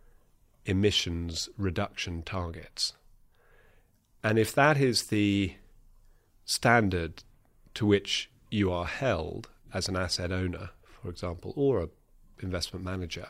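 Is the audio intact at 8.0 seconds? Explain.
Yes, the audio is intact at 8.0 seconds, with no dropout, click, distortion or other fault audible at that moment.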